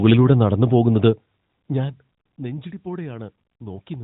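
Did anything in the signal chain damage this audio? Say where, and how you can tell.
No, nothing in this speech recording stood out on listening as damage from any stage of the signal chain.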